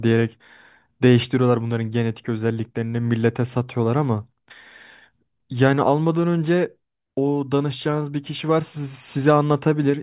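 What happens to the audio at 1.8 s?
Nothing goes wrong at 1.8 s; the speech there plays through cleanly, with no dropout, click, distortion or other fault.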